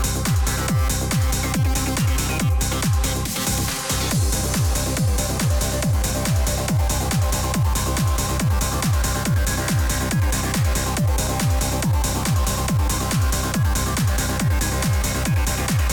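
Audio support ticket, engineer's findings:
No fault found on review of the recording. No working path needs separate comment, and the ticket can be closed with no action required.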